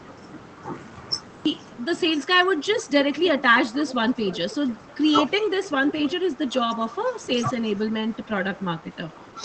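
The clip opens on digital silence, a cut-off start: the waveform is a flat line until 1.46 s, where the speech jumps in already under way with no attack or fade. The recording began late and caught the talker mid-sound. On a spectrogram this shows as a blank region ending in a hard vertical edge, with full-energy bands appearing at once.

From 2.25 to 2.9 s comes the first speech suppressed in double talk. The voice dips by about 10 dB in short patches totalling roughly 150 ms, sounding briefly pulled back. This is likely an echo canceller turning down the near talker while the far side was also speaking. On the waveform the envelope pinches inward.

Overlapping this, from 2.78 to 4.67 s, is an echo leak. A faint delayed copy of the speech trails the original by 305 ms, at about 15 dB below it, giving a doubled sound. It is likely loudspeaker pickup the canceller failed to remove. On a spectrogram the harmonic stripes reappear as a weaker, shifted ghost. 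A second, quieter leak runs from 5.63 to 6.14 s, with the same 305 ms delay at about 20 dB down.

The second suppression, from 6.2 to 6.5 s, is milder. It drops about 5 dB over roughly 100 ms and shows as a slight dent in the envelope.

Throughout, the spectrogram tops out near 8 kHz, which fits an Opus call link at around 20 kbps.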